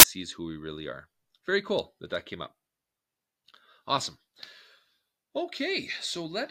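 File tags played as audio, from 0.00 to 0.03 s: the clip opens with a short block of non-audio data read out as if it were samples, and here it is the compressed bytes of an embedded cover picture. Because compressed image data looks statistically random, it decodes as very loud white noise, heard as a sudden hard-edged burst of static about 30 ms long. The burst cuts off abruptly just before the speech begins with "who we really are".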